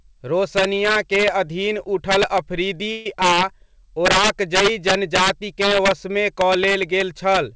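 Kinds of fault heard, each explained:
Integer overflow: The gain pushed the signal about 9 dB past the integer limit, and instead of clamping, the loudest peaks wrapped around to the opposite sign. Throughout the speech, the small share of samples that overshoot produce harsh, violent cracks on loud syllables, sharper than ordinary clipping.
Call audio freeze: Packets were likely held up in transit until the jitter buffer ran dry, so from 2.92 to 3.06 s the receiver stretched the last sound into a fading buzz or hiss for about 135 ms. Speech then resumes where it stopped, nothing lost, just delayed.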